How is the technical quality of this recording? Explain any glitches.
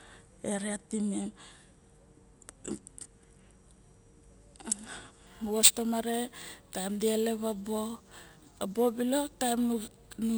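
From 5.27 s to the end, the speech picks up a bright, metallic fizz that rises and falls with the voice. This is imaging from sample-and-hold upsampling: repeating samples without smoothing mirrors the spectrum into 12–24 kHz at about −10 dB, which fits 24 kHz audio raised to 48 kHz.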